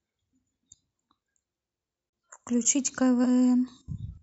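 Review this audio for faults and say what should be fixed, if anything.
There is a gap at a join of encoded pieces from 2.10 to 2.13 s. The speech stops dead for about 34 ms, then resumes exactly where it left off. The codec smears the edges, so the truly silent part is shorter. Two separately encoded pieces were joined without trimming. The encoder's start-up delay and the padding on the last frame both stayed in as silence. To prevent it, encode the speech in one pass, or trim each piece's delay and padding before joining.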